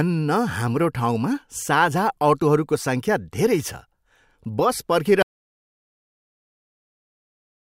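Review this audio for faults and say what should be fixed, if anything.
An audio dropout to silence starts at 5.23 s and runs to the end: the speech cuts off mid-flow into silence with no room tone, likely from a lost input or mute. To prevent it, secure the input connection and monitor levels live so an interrupted feed is caught during recording.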